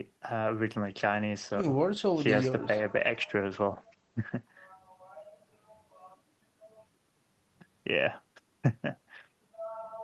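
From 0.77 s to 4.49 s there's a call bitrate drop. The bandwidth estimate dips, the encoder gets squeezed, and the audio sounds like a fall from roughly 32 kbps to about 13 kbps, bottoming out for around 3.6 s. The top end gets chopped from 20 kHz down to 8 kHz, so the speech goes muffled and rough and watery from the coarser coding, then opens back up once the rate recovers.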